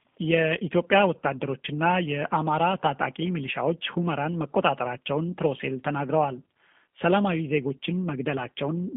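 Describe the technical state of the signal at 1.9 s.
At 1.9 s the speech carries G.729 codec damage, present across the whole clip. The codec rebuilds each 10 ms frame from a vocal tract filter, pitch predictor and sparse pulses, which fits an 8 kbit/s rate. Content sits within a 200 Hz to 3.5 kHz band with nothing above 3.7 kHz, giving a plainly rough, synthetic, muffled quality.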